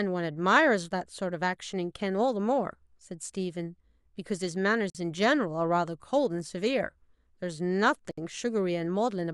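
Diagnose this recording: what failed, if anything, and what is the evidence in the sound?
Codec-stage gap at a join of encoded pieces: silences at 4.90 s (48 ms) and 8.11 s (65 ms). Encoder delay and padding persist, and speech resumes unbroken, unlike a dropout.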